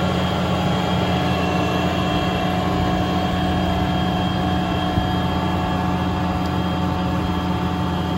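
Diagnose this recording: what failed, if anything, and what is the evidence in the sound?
Nothing failed here as far as I can hear: there's no break, glitch or damage anywhere in the sound to point to any stage of the chain.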